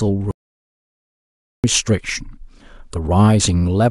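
An audio dropout to silence runs from 0.31 s to 1.64 s in this speech clip, removing about 1.33 s of sound. The speech cuts off abruptly and resumes just as suddenly, and the gap between is dead silence with no room tone beneath it. That points to the input signal vanishing while recording continued, likely a disconnected device, broken link or accidental mute, so silence was written where the speech should be.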